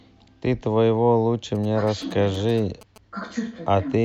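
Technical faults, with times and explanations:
1.55–2.98 s, GSM signalling bursts: a nearby 2G phone transmits short clusters of radio bursts, which fits a handset signalling to the network rather than carrying a call. The audio circuitry rectifies that RF energy and turns it into audible interference. Over the speech comes a galloping dit-dit-dit of brief buzzes pulsing at about 217 Hz, the TDMA frame rate, sitting roughly 20 dB below the speech.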